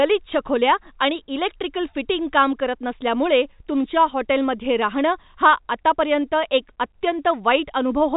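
No technical faults can be heard in the speech; it carries the expected sound of G.711 A-law telephone coding, with nothing above about 3.8 kHz and only the faint level-following grain that the format brings.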